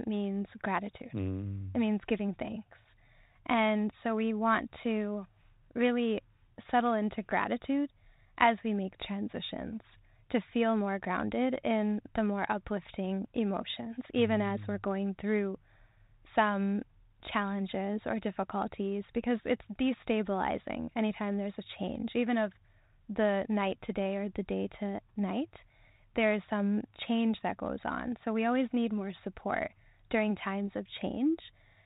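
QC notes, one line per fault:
No fault to note, so there are no per-fault lines.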